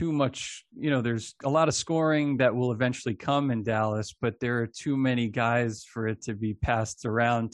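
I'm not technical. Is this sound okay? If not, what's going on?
Yes, nothing in this speech recording points to a technical fault.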